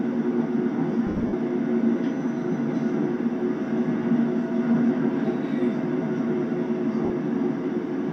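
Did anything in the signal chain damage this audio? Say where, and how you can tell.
Yes. From 1.07 to 1.33 s the sound dissolves into a noisy smear in bursts, totalling 180 ms, the longest around 70 ms; another 50 ms smear hits at 7.05 s. These are lost LE Audio frames on the Bluetooth link, concealed by LC3 repeating the last spectrum with random signs.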